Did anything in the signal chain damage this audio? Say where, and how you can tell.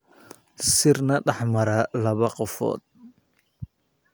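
No, nothing in this speech recording stood out as damage from any stage of the signal chain on listening.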